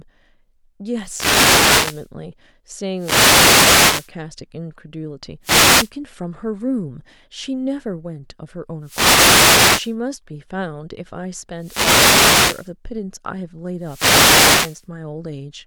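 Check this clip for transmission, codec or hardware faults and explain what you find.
The speech here is hit by repeated wireless microphone noise hits, six of them: 0.99 to 2.10 s, 2.95 to 4.12 s, 5.42 to 5.92 s, 8.81 to 9.96 s, 11.57 to 12.72 s and 13.78 to 14.87 s. Each one is the FM radio link fading as reflected signals cancel the direct one at the receiver. The receiver's own noise rises into that gap, so you get a swish or burst of static, mostly about a second long and only half a second at 5.42 s, laid over the speech.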